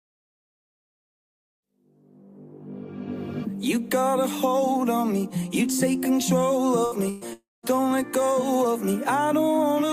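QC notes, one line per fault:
6.85–6.95 s and 7.10–7.24 s, burst of packet loss: consecutive packets were lost or arrived too late, so the receiver concealed the gaps by extending the last sound and fading it. The first gap is 62 ms of concealed fill with about 60 ms of audio missing. The second is 116 ms with about 120 ms missing and no full silence. Each is heard as a brief held buzz or fading hiss, after which the sound jumps ahead.
7.33–7.66 s, long network dropout: a long stretch in which likely no packets got through, so about 300 ms of audio never arrived. The receiver first extends the last sound into a decaying buzz or hiss, and the final 0.2 s or so is silence. The sound then resumes later than where it cut off, with the missing stretch gone.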